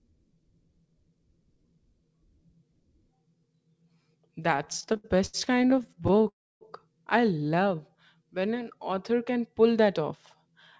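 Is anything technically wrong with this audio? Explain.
Yes. The speech, band-limited to nothing above 8 kHz as G.722 call audio would be, has three playback faults.

From 4.54 to 6.26 s there are repeated stalls (stutter): about thirty brief hold-ups, the longest 74 ms, as the jitter buffer kept emptying and the receiver extended the last sound. Roughly a quarter of that span is filler, so the speech drags and stutters without losing content.

From 6.28 to 6.63 s comes a call audio freeze: the sound is held, then fades to silence for about 280 ms before resuming where it stopped. The likely cause is late packets draining the buffer.

From 7.55 to 9.15 s a jitter buffer slow-down repeats pitch periods to rebuild reserve, adding 133 ms. Speech runs at 92% speed with unchanged pitch and drawn-out sounds.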